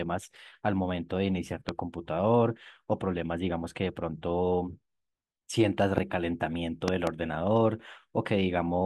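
Loud pops land three times in this speech: a single sharp one from 1.69 to 1.71 s, another from 5.98 to 6.00 s, and then a quick double pop between 6.88 and 7.09 s. Each one jumps roughly 20 dB above the speech, which carries on underneath. That's likely a brief voltage spike, from a plug, switch, static or driver glitch, getting added to the signal and shaped by the circuitry after it.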